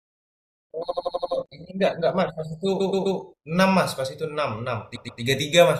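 Repeated frames cause three stutters, each a short block of compressed speech replayed: 0.90 to 1.32 s, an 85 ms block five extra times; 2.79 to 3.18 s, a 128 ms block three times; 4.95 to 5.20 s, twice. Together they add about 1.07 s.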